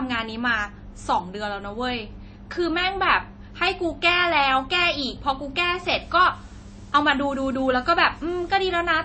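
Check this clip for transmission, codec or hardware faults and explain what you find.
Two faults are audible in this speech clip. Throughout, the sound is watery and swirly, with metallic chirps on s sounds, smeared consonant onsets, and nothing above 8.4 kHz. The likely cause is heavy MP3 compression, which fits a bitrate around 32 kbps: the encoder cuts the treble at a fixed frequency and drops weak frequency lines that flicker between frames.

From 5.70 s to the end, a constant, even hiss sits under the speech, roughly 30 dB below it, with no added distortion. This is low bit depth with dither, which points to about 9-bit resolution. Dither added before rounding turns the quantisation error into steady white noise.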